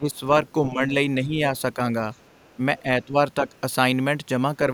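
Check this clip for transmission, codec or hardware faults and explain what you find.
Two echo-canceller faults appear in this speech clip.

Speech suppressed in double talk at 0.00–0.22, 0.63–0.81, 1.21–1.38, 2.80–2.86, 3.05–3.17 and 3.40–3.47 s: the canceller likely mistook overlapping talk for echo and attenuated it, so the talker dips by roughly 5 to 15 dB.

The other side's voice leaks through at 2.13–2.56 and 3.56–3.60 s: residual loudspeaker echo was likely not fully cancelled, leaving a faint second voice far below the talker.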